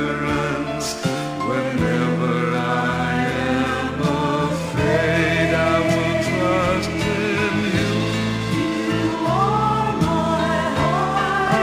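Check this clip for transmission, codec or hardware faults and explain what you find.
One fault runs through the whole clip: imaging from linear upsampling. The sound points to a 24 kHz source raised to 44.1 kHz by straight-line interpolation. That weak filter dulls the top and leaves a mirror image from 12 to 24 kHz, roughly 35 dB down. It adds faint metallic shimmer to bright sounds.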